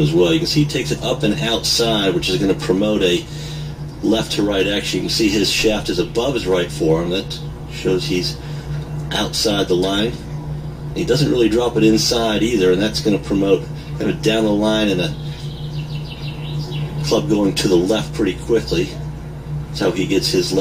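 From start to finish a steady mains hum sits under the sound, a 60 Hz tone with some low harmonics, sitting roughly 15 dB below the signal. Power-line current has leaked in, likely through a ground loop or nearby transformer. Unlike broadband rumble, it holds one fixed, pitched note.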